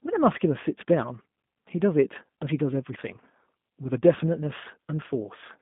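From start to finish the speech carries the sound of the G.729 codec, plainly audible throughout. The band is squeezed to roughly 150 Hz up to 3.6 kHz, so there's no air up top and little weight below. The roughness comes from each 10 ms frame being rebuilt out of a vocal tract filter, a pitch predictor and a handful of pulses, giving that slightly synthetic, buzzy edge. It fits an 8 kbit/s G.729A link.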